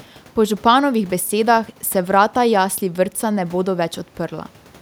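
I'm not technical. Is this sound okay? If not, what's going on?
Yes, nothing in this speech recording points to a technical problem with the signal.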